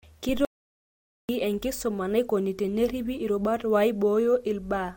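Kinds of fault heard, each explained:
Audio dropout to silence: from 0.45 to 1.29 s the speech cuts off mid-flow into total silence with no room tone, likely from the input being lost while recording continued, so about 0.84 s of speech is missing before it resumes with "enkisuma naikoni teneripi irubat".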